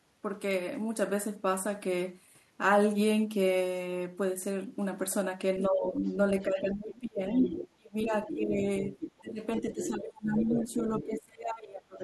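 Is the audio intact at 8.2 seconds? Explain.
No. At 8.2 s two faults overlap. The first is speech suppressed in double talk, running from 6.42 s to the end at 12.03 s. The level repeatedly dips, by as much as roughly 25 dB and for about four seconds in total. This is likely an echo canceller that, with both sides talking, could not separate the talker from loudspeaker echo and turned everything down. On a waveform the envelope caves in irregularly; on a spectrogram the upper bands thin out or blank in patches.

The second is the other side's voice leaking through, from 8.04 s to 8.36 s. A second voice sits roughly 10 dB below the talker, likely far-end audio from the loudspeaker that the canceller failed to remove from the microphone. A spectrogram shows a faint second set of harmonics crossing the main ones; the waveform shows small bursts added on top of the talker's signal.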